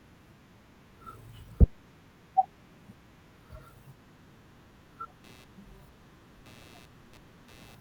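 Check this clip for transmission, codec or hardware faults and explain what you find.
One hardware fault is present. Computer activity noise runs from 5.24 s to the end: load changes on the computer disturb the audio circuit's shared ground, adding a buzzy chirp pulsing around 100 Hz, roughly 25 dB below the speech.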